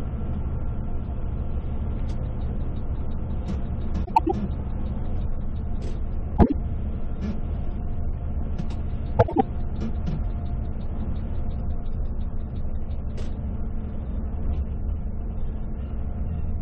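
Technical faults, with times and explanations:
4.05–4.32 s, 6.37–6.52 s, 9.19–9.41 s: frames out of order. In each span, two adjacent blocks of about 105, 52 and 78 ms play swapped, producing a garbled flutter; the waveform and spectrogram show abrupt discontinuities there, and no time is lost.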